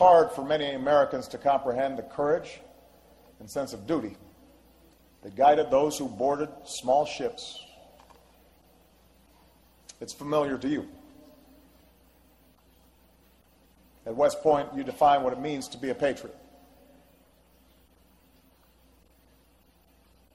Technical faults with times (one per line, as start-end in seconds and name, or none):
none